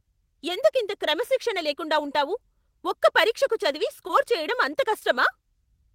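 Speech with short concealed packet loss at 4.07–4.11 s and 4.99–5.03 s: about 20 ms went missing and was patched by extending the preceding sound, heard as a brief smear. On a spectrogram, each patch shows as a stretch where the preceding sound is continued.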